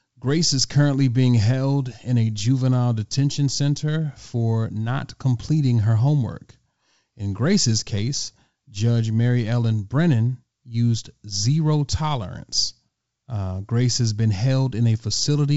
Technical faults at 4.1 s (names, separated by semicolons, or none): none